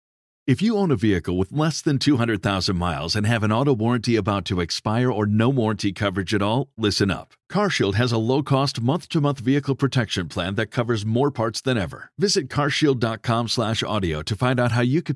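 No technical faults can be heard anywhere in the recording. Nothing in the speech calls for a timestamp or for an account of something going wrong.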